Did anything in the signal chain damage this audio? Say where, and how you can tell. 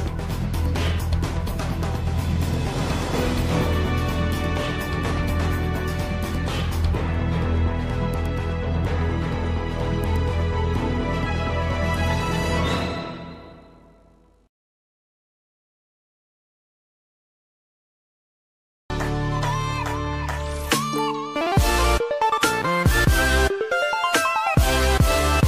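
No, nothing in the signal chain stood out as having damaged this audio on listening.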